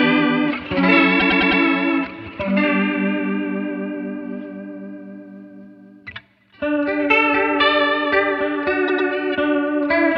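Repeated frames at 1.19–1.61 s and 8.87–9.08 s: a 104.5 ms block (about four compressed frames) replays four, then two extra times, producing stutters, visible as identical tiled waveform and spectrogram slices.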